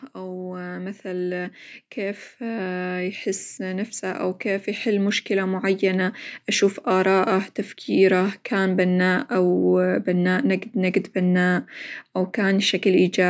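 Automatic gain rising runs from 0.14 to 6.26 s in this speech clip: the gain control judged the input too quiet and lifted it by about 12 dB over those six seconds, so voice and background noise swell upward together rather than the speech alone getting louder.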